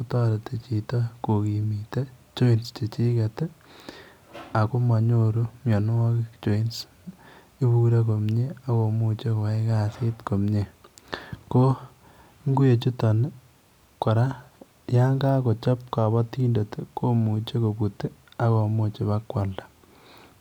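No technical faults can be heard anywhere in the recording.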